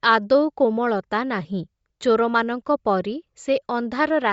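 Throughout the speech, the system has likely applied Bluetooth LC3 compression, a transform codec coding 10 ms frames at a low bitrate that fits 32 kbps. Nothing sounds above 7.7 kHz, and noise-filled upper bands give a plainly audible breathy, grainy edge.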